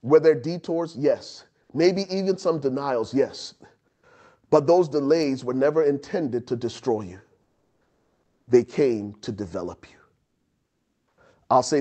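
Speech carrying comfort noise in place of the background at 3.87–4.03 s, 7.41–8.47 s after "intended to destroy you", and 10.25–11.17 s after "came to develop you": the real background becomes steady, featureless hiss, about 12, 3 and 7 dB quieter, likely from Opus DTX. Unlike a noise gate, a noise floor remains rather than silence.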